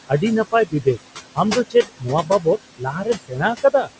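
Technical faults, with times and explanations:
throughout noise suppressor artifacts. The room noise sits about 13 dB below the speech. The suppressor cuts it by about 21 dB in the pauses, then lets it back in under the speech. So the background visibly pumps up and down with each phrase.
0.52–0.98 s, 1.55–2.06 s, 2.23–2.46 s, 2.78–3.9 s speech cut by the noise suppressor. Quiet parts of the speech are mistaken for noise and turned down with it. The drop reaches about 19 dB, about 10 dB in the third stretch. Soft sounds there come out faint or swallowed, for a fraction of a second each time, and about half a second in the last stretch.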